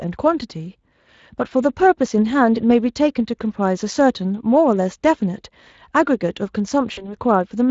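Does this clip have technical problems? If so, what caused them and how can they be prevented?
Yes. Speex codec damage runs throughout: the speech sounds noisy and hoarse, consistent with a bitrate around 20 kbps, because too few bits remain to code the excitation accurately. Prevent it by using a higher quality setting or a modern codec such as Opus.

VoIP packet loss concealed by the speech codec occurs from 6.93 to 7.15 s. About 40 ms of audio went missing, which fits two lost 20 ms frames. The decoder stretched its last pitch and filter while lowering the gain frame by frame, and the speech stays weakened after packets resume. Prevent it with a more reliable network path, forward error correction, or a larger jitter buffer.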